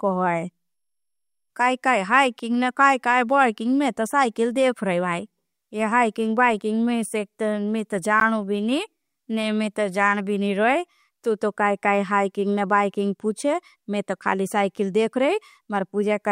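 At 8.2 s the speech drops to silence for about 12 ms and then resumes. The likely cause is a Bluetooth stall: interference delayed packets, the headphone buffer emptied, and playback halted briefly until the retransmitted audio arrived.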